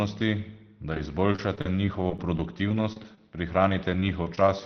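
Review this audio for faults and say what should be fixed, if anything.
Repeated packet loss (robotic sound) runs from 0.92 to 3.18 s and again from 3.69 to 4.38 s. In each stretch, short holes follow one after another. Each hole is filled by extending the preceding sound, which produces a choppy texture with pieces missing. The longest holes last about 37 ms in the first stretch and 21 ms in the second. Concealment rebuilds around 200 ms and 70 ms of audio respectively, roughly a tenth of each span. The speech band tops out near 6 kHz, consistent with an Opus call path at about 24 kbps. Fix this by improving network stability or enabling in-band FEC and a deeper jitter buffer.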